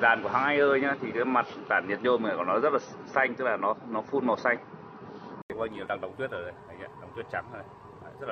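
An input switched to a poorer device from 0.0 to 5.5 s: the sound is dull and boxy with nothing above 6 kHz, a faint added hiss and a slightly different level, likely from a narrower-band microphone. An 80 ms silence marks the switch back to fuller sound.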